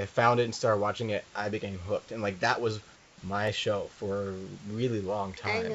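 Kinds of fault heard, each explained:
Dropped samples: a fraction of a millisecond of the stream went missing, likely lost in buffering, so the waveform jumps straight to a later value. Each gap is far too short to remove any sound and is heard only as a single sharp click, at 0.57, 3.47 and 4.62 s.
Comfort noise in place of the background: the sender likely stopped transmitting during a pause, and the receiver filled 220 ms from 2.96 s with synthetic noise. The real room background, sitting about 29 dB below the loud parts, becomes a steady, featureless hiss about 2 dB quieter.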